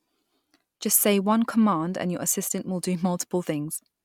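No technical faults are audible anywhere in this speech recording.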